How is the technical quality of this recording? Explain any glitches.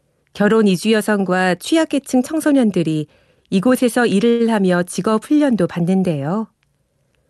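The speech carries one audible glitch, heard through a call path whose spectrum stops near 12 kHz, which fits an Opus super-wideband setting. From 4.29 to 4.42 s there is a call audio freeze, likely from packets delayed in transit until the jitter buffer ran dry. The receiver stretched the last sound into a fading buzz or hiss for about 0.1 s, then resumed with nothing lost, so everything after arrives roughly 100 ms later. On a spectrogram this shows as a smeared, steady band losing energy. The waveform shows a decaying, repetitive stretch with no silent gap.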